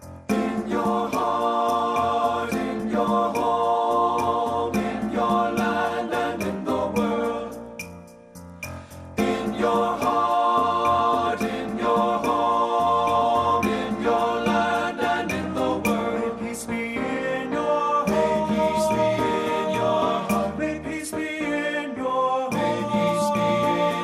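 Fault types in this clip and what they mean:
MP2 compression: Throughout the clip the sound is dull, with a gurgling, grainy roughness and upper frequencies that flicker in and out rather than rolling off smoothly. This is likely MPEG Layer II coding starved of bits: it splits the signal into 32 equal sub-bands, switches off upper bands it cannot afford, and coarsely quantises the rest. The damage fits a rate around 80 kbps. Unlike a simple low-pass filter, the top end here comes and goes.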